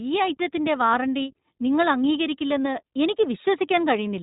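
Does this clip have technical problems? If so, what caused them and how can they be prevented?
Yes. The iLBC codec runs through the whole speech clip, and the damage is easy to hear. Nothing comes through above about 3.8 kHz, so everything sounds muffled and phone-like. Each short frame's excitation is coded on its own, giving a rough, slightly synthetic edge that fits the 20 ms, 15.2 kbps mode. To avoid it, record or send through a wideband codec such as Opus, and keep the original file instead of a narrowband VoIP copy.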